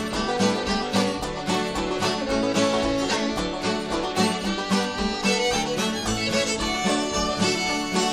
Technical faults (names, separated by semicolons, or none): none